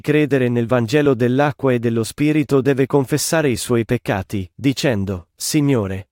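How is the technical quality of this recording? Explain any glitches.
The speech comes across as a technically sound signal, with no faults audible anywhere in the recording.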